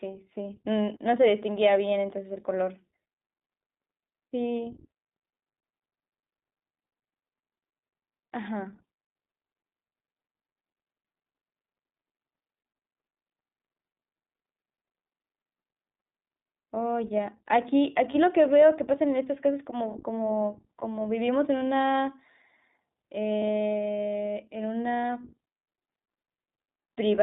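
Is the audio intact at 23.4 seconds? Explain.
No. From 23.38 to 23.43 s there are lost iLBC frames: about 40 ms, which fits two missing 20 ms frames, replaced by a repeated pitch cycle mixed with noise. It sounds like a brief held, buzzy vowel and shows as flat, smeared harmonics on a spectrogram before normal detail returns at once. The iLBC codec also runs throughout: a narrowband line of about 200 Hz to 3.7 kHz, with nothing above it on a spectrogram, and a slightly rough, synthetic texture.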